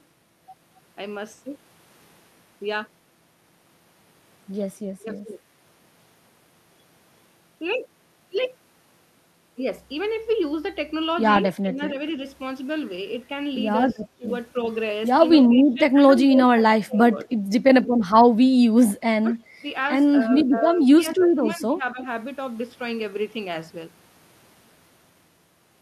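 The speech dips and thins in gaps at 5.06–5.27, 11.62–11.99, 13.94–14.27, 15.43–17.29, 19.23–19.66 and 20.28–22.04 s, dropping by up to roughly 30 dB. This is likely speech suppressed in double talk: the echo canceller turned the talker down along with the loudspeaker echo. Within that last stretch, at 21.11–21.16 s, a faint delayed copy appears about 20 dB below the speech and 276 ms late. This is likely echo leak, where loudspeaker pickup escaped cancellation.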